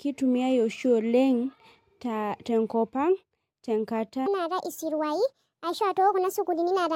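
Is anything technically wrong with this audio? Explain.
Yes. From 4.26 s to the end, the speech plays at the wrong sample rate. Samples are read out 1.5 times too fast, with no conversion. Speed and pitch rise together, by about 7 semitones. Voices turn high and hurried. This fits 32 kHz audio played at 48 kHz.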